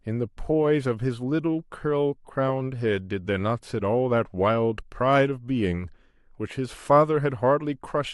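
No technical faults can be heard in this speech recording.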